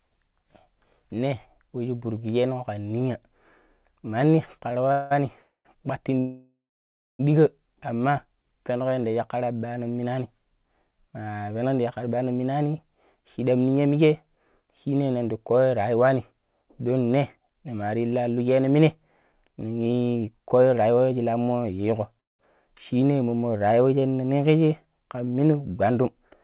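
From 4.70 to 5.13 s the speech shows repeated stalls (stutter). Packets were arriving later or more slowly than they were being played out, so the jitter buffer ran dry four times in under half a second. The receiver stretched the last sound to bridge each gap, filling about 211 ms in total, half the span, with the longest gap at 186 ms. Nothing is lost, but the speech catches and drags.

A call audio freeze follows at 5.39 to 5.67 s, and a longer one at 6.19 to 7.21 s. Each time the buffer emptied and the receiver extended the last sound as a fading buzz, then went quiet, for about 100 ms in the first and 600 ms in the second, before resuming where it stopped. This adds roughly 261 ms and 1.0 s of delay, most likely from packets held up in the network. A third, shorter freeze at 22.20 to 22.41 s is almost all silence, about 180 ms of its 188 ms.

Jitter buffer slow-down appears at 8.26 to 9.13 s and again at 22.93 to 24.13 s. 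Short of reserve, the receiver repeated single pitch periods and bits of pauses to rebuild its cushion, adding about 95 ms and 98 ms. The speech runs at 90% and then 93% of normal speed, at unchanged pitch, with sounds drawn out.

Jitter buffer speed-up runs from 11.48 to 12.18 s and from 19.32 to 21.34 s. The buffer held more audio than its target, so it trimmed short pieces of a pitch period or so, many times in a row. That removes around 70 ms in the first stretch and about a fifth of a second in the second, pushing the speech to 109% and 110% of normal rate at the same pitch. The result sounds hurried. All of this is heard through a call path band-limited to 4 kHz, which fits G.711 mu-law at 64 kbps.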